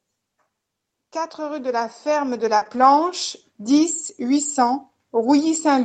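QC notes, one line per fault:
1.12–4.5 s, automatic gain rising: the level creeps up by about 10 dB over more than three seconds, with the voice and the room noise swelling together. That's the gain control deciding the input was too quiet and slowly turning itself up.
2.57–2.63 s, short concealed packet loss: about 40 ms never arrived in time, so the decoder stretched out the last bit of sound to cover the hole and then blended back in. You hear it as a quick smear or wobble right there.
2.61–2.87 s, lost packet rebuilt from error correction: right after that, a string of separate packets went missing, but each following one carried a low-bitrate copy, so there's no gap. Those patched stretches, about 140 ms in total, sound rougher and noisier than the surrounding Opus audio.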